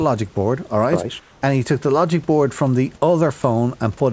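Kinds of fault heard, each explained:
Comfort noise in place of the background: From 1.20 to 1.42 s the room's textured background gives way to a smooth, featureless hiss about 3 dB quieter, likely synthetic fill generated while transmission paused. Unlike a voice-detector dropout, no speech is lost, only the background's detail.
Sound dropped by the voice detector: At 3.42 s a brief 20 ms piece of speech vanishes into steady noise, likely because the detector mistook that quiet moment for background and stopped sending. What separates it from plain comfort noise is that actual speech content disappears.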